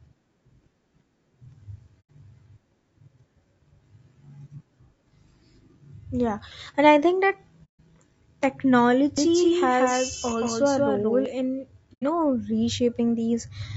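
Throughout, the speech was likely squeezed through low-delay AAC compression at a rate fitting about 32 kbps, leaving it plainly rough and grainy with a thin, synthetic top.

At 2.00 to 2.10 s, 7.64 to 7.80 s (just after "and I think that") and 11.93 to 12.04 s, there is AAC frame loss with muting: the decoder zeroed the missing frames. Each gap sounds like a soft-faded hole of roughly 0.1 to 0.15 s.

From 9.18 to 11.26 s, a doubled audio track appears, likely from a second, slower capture path. A copy about 5 dB quieter trails by around a fifth of a second, starting and stopping abruptly.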